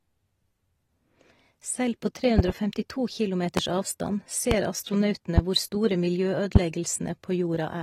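Throughout the speech, AAC compression damage is plainly audible: smeared, warbling sibilants, likely from AAC-LC at a bitrate around 32 kbps. A spectrogram shows patchy, holed high bands, with nothing above 21.2 kHz. Loud pops, likely voltage spikes, appear as a double pop from 2.39 to 2.52 s, then single 0.03 s pops at 3.57, 4.51, 5.38 and 6.56 s. They are sharp transients about 20 dB above the speech, visible as tall waveform spikes and full-height spectrogram lines.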